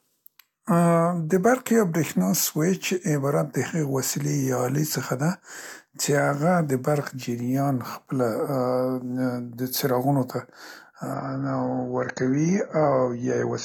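At 11.14 s the speech drops abruptly in quality and stays degraded until the end at 13.64 s, the signature of an adaptive stream at a lower bitrate: the player switched to a leaner encoding when throughput fell. The step is instant, with no gap. Nothing remains above 6.9 kHz, so sibilants lose their edge, and codec artefacts rise, consistent with AAC falling from roughly 96 to 24 kbit/s.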